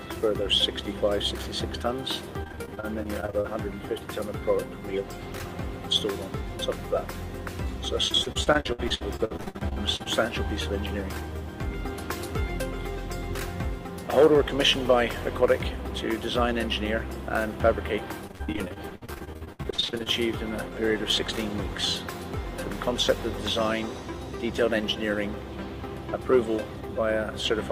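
Repeated packet loss (robotic sound) hits at 2.43 to 3.46 s, 8.08 to 10.08 s and 18.27 to 20.08 s. Lost packets leave short holes, each patched by stretching the last sound. Concealment fills about a quarter to two fifths of each span, so the audio turns choppy with pieces missing.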